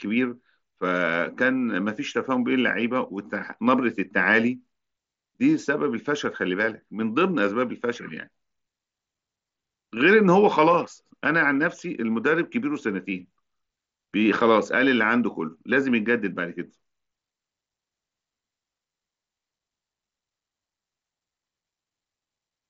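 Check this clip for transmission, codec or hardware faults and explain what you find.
No transmission, codec or hardware faults turn up anywhere in the speech. What can be heard of the Bluetooth mSBC headset link is a wideband band reaching up to about 8 kHz, with a light grainy edge on the louder syllables.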